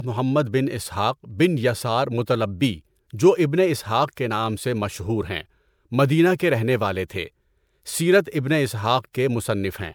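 Throughout the speech, swirly, hollow smearing and blurred attacks exceed what one MP3 encode would cause: generation loss, likely from a few re-encodes.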